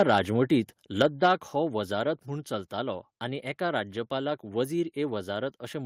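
Right from the start, 0.0 to 0.18 s, the speech has that harsh, crackly edge on its loudest bits, and it comes back from 1.0 to 1.31 s. That's microphone overload: the input was likely set too hot, so peaks ran about 4 dB and then about 5 dB past what the converter could take and got their tops sheared flat. Only a small slice of samples is hit, a few percent at the opening and a bit over one percent later, but it's enough to give those syllables a gritty bite.

At 1.02 s, just after that second distorted peak starts, the whole level, voice and background together, drops in one step by about 4 dB. That's a microphone volume stepped down, most likely the call software reacting to the clipping and pulling the device's input gain down in a single move. You hear it as a sudden dip rather than a smooth fade.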